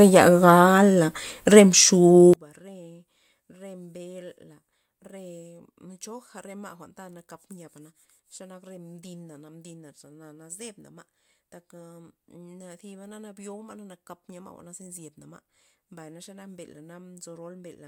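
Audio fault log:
2.34–17.87 s, one channel inverted: the speech drops about 29 dB. A reversed channel likely cancels the shared centre in the mono sum, rather than applying a uniform gain cut.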